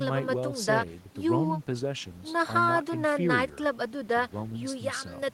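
Speech recording, no technical faults detected.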